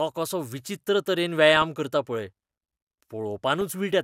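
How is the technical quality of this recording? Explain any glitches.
The recording has two bursts of DAB burbling. The first runs from 1.47 to 1.65 s, between "कसो विचित्र तरेन" and "करता पळय". The second is a brief blip at 3.61 s. Weak reception let bit errors, around 0.15 and 0.1 percent, slip past error correction into the MP2 data. Corrupted samples put short blips of noise in individual sub-bands, and corrupted scale factors make sub-bands jump in level, giving short bursts of burbling over the speech. The first burst's length suggests several consecutive frames were damaged.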